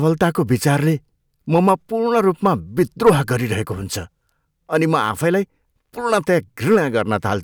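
Hard clipping hits speech peaks at 1.54–1.73 s (about 2 dB over), 2.17–3.10 s (about 8 dB, harsh fuzz) and 6.12–6.77 s (about 3 dB), flattening tops into crackle.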